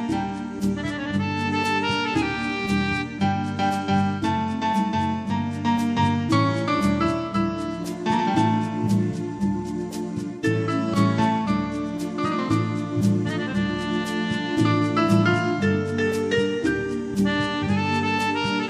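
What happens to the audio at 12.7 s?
Nothing goes wrong at 12.7 s; the audio there carries on intact, with no dropout, click, distortion or other fault.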